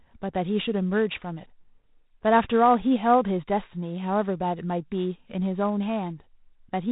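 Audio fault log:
Throughout, G.726 ADPCM: the speech carries a harsh, rasping hiss that rises and falls with its level, and nothing passes above 3.8 kHz. Each sample is coded as only a few bits of difference from an adaptive prediction, which fits the 24 kbit/s rate.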